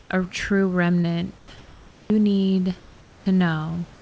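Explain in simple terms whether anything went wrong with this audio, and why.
A few things went wrong, all typical of an internet call.

At the very start, up to 0.1 s just before "a true", and again from 1.58 to 2.1 s, 2.8 to 3.26 s and 3.94 s to the end, the natural background turns into a flat, even hiss. That is comfort noise in place of the background, likely because the sender paused transmission and the receiver filled the gap with made-up noise. The stretch from 1.58 s is much quieter than the real background.

From 1.02 to 1.06 s, right after "a true", and from 3.38 to 3.42 s, there is a tiny smear or blip. That is short concealed packet loss: a sliver of audio arrived too late, and the receiver patched it by stretching the sound just before it.

From 1.38 to 1.5 s, a bit of sound, about a twentieth of a second, fades into hiss. That is sound dropped by the voice detector, likely because the sender mistook quiet sound for background.

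From 1.94 to 2.1 s, the sound returns abruptly, missing its soft beginning. That is onset clipped by the voice detector, likely because the detector noticed the restart too late and the first moments were never sent.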